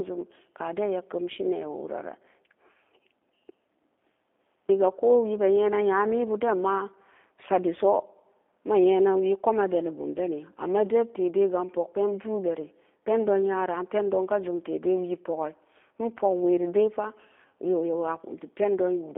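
Speech that sounds thin and boxed in, with nothing below about 250 Hz or above 3.5 kHz, and a plainly rough, buzzy, synthetic edge throughout. That is G.729 codec damage: the speech is rebuilt from a filter and sparse pulses, which fits 8 kbit/s G.729A.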